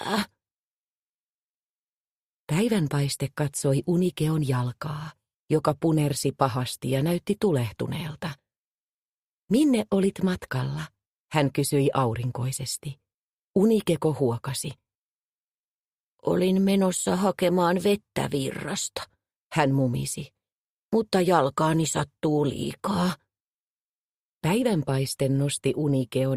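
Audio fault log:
No fault can be heard anywhere in the clip. Nothing in the audio calls for an entry in this log.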